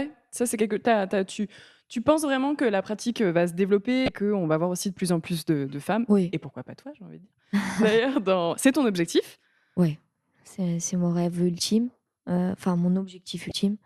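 Speech with damaged data in the compressed stream at 4.05–4.09 s, after "pratique euh va se" and before "qu'on va voir aussi", and again at 13.48–13.51 s: corrupted bytes derail the decoder, producing brief glitches that show as abrupt waveform discontinuities.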